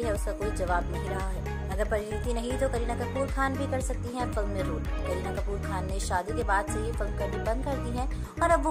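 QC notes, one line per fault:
No technical faults are audible; the signal holds steady level and continuity across the whole clip.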